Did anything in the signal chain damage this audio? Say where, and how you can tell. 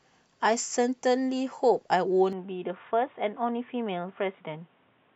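Yes. An input switched to a poorer device at 2.33 s and stays to the end: the speech abruptly loses everything above 3.8 kHz, turning dull and boxy, with no gap and barely any level change. A new noise floor sits roughly 40 dB down. The likely cause is the driver rerouting capture to a narrower-band microphone.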